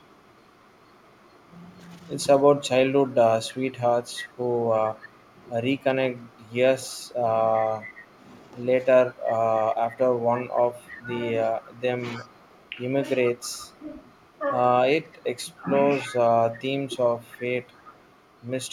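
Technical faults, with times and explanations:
0.00–1.48 s, 3.10–8.19 s and 9.12–18.72 s: echo leak. There's a copy of the speech trailing the original by 312 ms, very faint at the start (about 40 dB down), then much more obvious from 3.1 s (about 20 dB down) and still clearly there from 9.1 s onward (about 25 dB down). It's likely a far end on loudspeaker whose echo canceller isn't fully catching what its mic picks up, so our own audio comes back late.
5.83–9.25 s, 10.82–12.26 s, 13.31–13.52 s and 14.98–16.96 s: speech suppressed in double talk. While both sides are talking, the speech dips in short chunks, roughly 10 dB in the first two stretches and around 15 dB in the last two, adding up to well under a second in each and only a brief blip at 13.3 s. Likely the canceller can't tell the talker from the loudspeaker echo, so it turns both down together.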